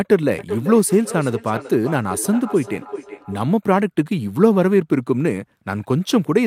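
From 0.38 to 3.44 s the speech returns at a regular interval of roughly 400 ms, peaking about 13 dB below the direct voice: feedback echo between two devices, where one device replays the other's microphone and that microphone recaptures it. Unlike room reverberation, the repeats arrive as distinct, evenly spaced copies.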